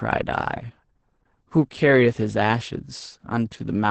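From start to finish the speech carries Opus voice compression. Nothing survives above about 8.6 kHz, which points to the SILK linear-prediction coder running in wideband at a very low bitrate, around 10 kbps. Its coarsely coded excitation makes the voice hoarse, muffled and faintly robotic. A simple low-pass filter would only dull the sound. MP3-style damage would add swirly, warbling highs. Here the roughness sits in the voice itself.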